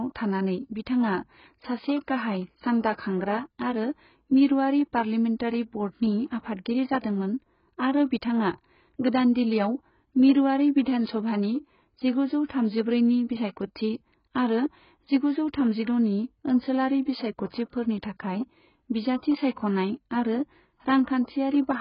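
From start to finish the speech is dull, with nothing above 5.1 kHz, and the vowels and sibilants carry a heavy warbling, fizzy smear. This is likely AAC compression: the encoder quantises each frame's spectrum so coarsely that bands drop out or get filled with substitute noise, which fits AAC-LC at a very low bitrate around 12 kbps. Unlike a simple low-pass filter, the band below the cut-off is also damaged, not just dulled.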